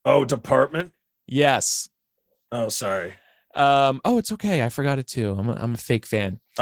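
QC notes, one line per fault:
throughout: Opus voice compression, speech sounds hoarse and slightly robotic, with plainly audible damage from coarse 16 kbps hybrid coding, SILK below 8 kHz and CELT above, reaching about 20 kHz.
0.80–0.94 s: one channel drops out, the sound abruptly falls about 6 dB for a moment, likely because one stereo channel vanished before the mono sum.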